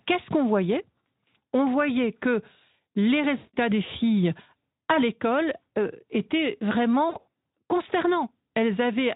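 VoIP packet loss concealed by the speech codec strikes at 3.37–3.56 s and 7.09–7.33 s. The Speex decoder stretches its last pitch and filter into a fading buzzy tone or coloured noise, and the second gap breaks up over about 240 ms in short dropouts.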